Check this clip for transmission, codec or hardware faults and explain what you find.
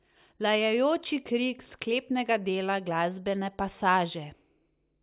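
No transmission, codec or hardware faults turn up in this clip.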